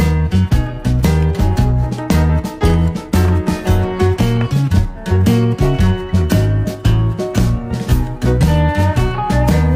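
No technical faults can be heard anywhere in the audio.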